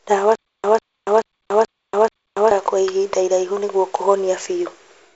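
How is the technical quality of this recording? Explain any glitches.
The recording has one clear glitch, a stutter with silent gaps, heard over audio carried through G.722 wideband telephone coding at 48 kbit/s, with nothing above 7.7 kHz.

From 0.35 to 2.51 s, just before "kwa ihinda iraihu nĩguo", a 147 ms fragment repeats five times, each followed by about 285 ms of dead silence, a 432 ms cycle. This is likely a stalled stream replaying its last fragment on each retry. The waveform shows identical bursts separated by flat silent stretches. The spectrogram shows matching blocks between blank columns.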